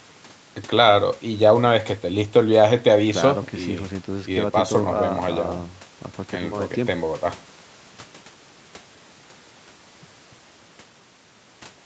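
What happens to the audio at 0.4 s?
Nothing goes wrong at 0.4 s: the speech passes through intact there, with only the ordinary call microphone processing trimming the lowest bass as it should.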